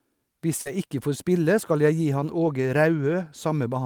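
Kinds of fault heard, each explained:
Short concealed packet loss: About 40 ms of speech, from 0.61 to 0.67 s, never arrived and was papered over by extending the preceding sound and fading back in. It is heard as a brief smear, unlike error-correction repair, which plays a coarse copy of the lost audio.
Lost packet rebuilt from error correction: Single 20 ms packets at 0.65 s and 2.45 s, the latter just after "skal jeg gi han", were replaced by the low-bitrate copy in the next packet. There is no gap or smear, just a momentary rough, noisier patch.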